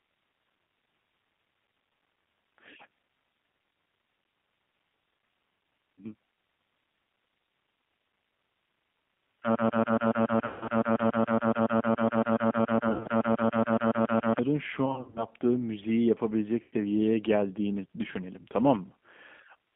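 Throughout, the speech is band-limited to about 200 Hz to 3.5 kHz and sounds plainly rough and synthetic. This is G.729 coding, which fits an 8 kbit/s G.729A line that rebuilds speech from a vocal tract filter, a pitch predictor and a few pulses per frame.

From 9.55 to 14.39 s, a 140.68 ms fragment repeats 34 times back to back, and the audio that should have played there is lost. This broken-record loop likely comes from a player, encoder or stream stalling and resending the last fragment it held.

Within that span, 10.46 to 10.68 s loses 150 ms, heard as stretched, fading sound. At 12.89 to 13.07 s, 110 ms is lost, scattered over 160 ms with runs up to 50 ms. This is VoIP packet loss concealed by the speech codec, where the decoder extrapolates from its last pitch and filter.

The same concealment returns from 14.86 to 15.26 s, with 180 ms lost over 300 ms in runs up to 50 ms. It occurs again from 16.62 to 16.73 s, where 100 ms is lost just before "geldiğini düşünelim".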